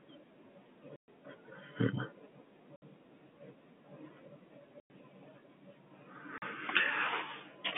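The speech drops out four times, each a packet loss filled with silence. The gaps run from 0.96 to 1.08 s, 2.76 to 2.82 s, 4.8 to 4.9 s, and 6.38 to 6.42 s. They last 120, 60, 100 and 40 ms. Those lengths fit 20 ms packets lost in runs. The receiver played nothing in their place. Each hole cuts the narrowband telephone sound abruptly.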